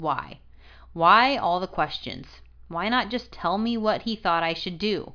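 No technical faults occur at any point in the speech.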